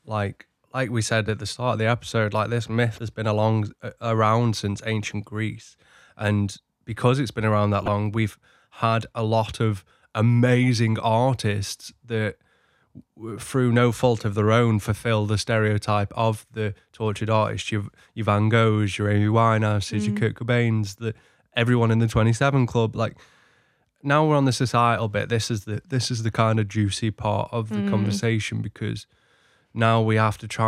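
Around 2.96 to 2.99 s there's a corrupt frame decoded: a couple of damaged frames played anyway, throwing energy to the wrong frequencies as a faint blip near -30 dBFS. At 7.80 to 7.88 s a handful of frames go, giving a louder burst around -15 dBFS.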